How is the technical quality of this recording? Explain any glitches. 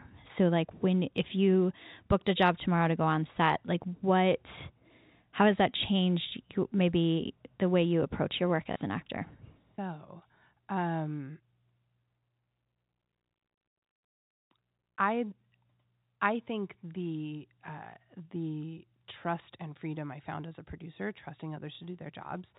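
Two brief dropouts with packet loss and the last packet repeated affect the recording, which passes through G.711 telephone coding, so a spectrogram shows nothing above 4 kHz.

At 8.73 s, after "you approach your work" and before "an actor so um", about 30 ms of audio was lost. The receiver replayed the previous packet, which fits a 30 ms packet size. There's a small blip. On a waveform this shows as a repeated chunk, and on a spectrogram as a thin vertical line.

At 21.75 s, just after "as a producer trusting", the same 30 ms repeat gives another small blip with the same repeated-chunk and vertical-line signature.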